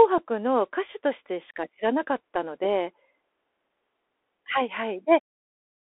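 Bluetooth CVSD headset codec damage runs through the whole clip and is plainly audible. The speech is confined to a 300 Hz to 3.5 kHz band, and one-bit delta coding, consistent with a 64 kbps CVSD link, leaves scratchy s sounds, granular hiss and distorted loud highs. The fade-out from about 5.0 s to 5.22 s is smooth.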